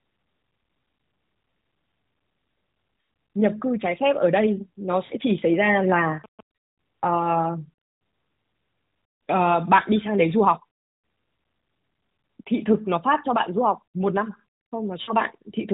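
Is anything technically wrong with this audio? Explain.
Yes. At 5.06–5.13 s, 10.92–11.02 s and 15.02–15.13 s, lost AMR speech frames failed their radio checksum. The decoder stretched the last good settings at falling gain, so the speech smears and fades for 40, 100 and 60 ms, which fits runs of two, five and three 20 ms frames.

From 5.30 to 6.41 s, GSM signalling bursts from a nearby 2G phone were rectified by the audio circuitry. They produce a galloping dit-dit-dit of short 217 Hz buzzes, well below the speech, over the narrowband AMR sound.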